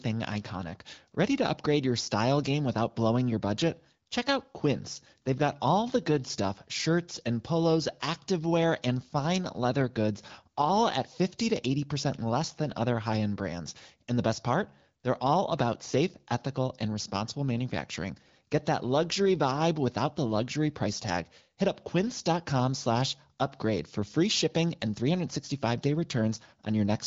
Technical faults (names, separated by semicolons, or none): none